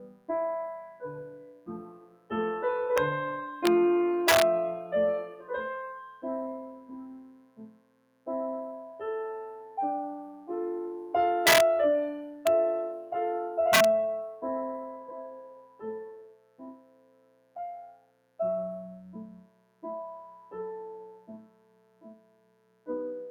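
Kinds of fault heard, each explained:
Mains buzz: A steady, raspy buzz runs under the whole clip at about 25 dB below the sound. It is built on 60 Hz, where spikes from a dimmer, rectifier or poor shielding enter twice per mains cycle and spray harmonics far up the spectrum.
Noise suppressor applied to music or sounds: Throughout, the level pumps and thins, with held sound and tails sinking while attacks get through, a swing of roughly 20 dB. A suppressor designed for speech is treating the steady parts of this audio as background noise and pulling them down.
Sound cut by the noise suppressor: In specific stretches the suppressor bites hardest, dropping the sound by up to about 17 dB and cutting decays short. It hits near 0.04, 0.87, 5.31 and 6.13 s, and longest from 15.01 to 18.39 s and 19.27 to 22.88 s.
Integer overflow: Six violent cracks land on loud peaks, at 2.98, 3.66, 4.28, 11.47, 12.47 and 13.73 s, far harsher than clipping. 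The signal overshoots full scale by only 1 to 4 dB, but the integer wraps to the opposite sign instead of being limited.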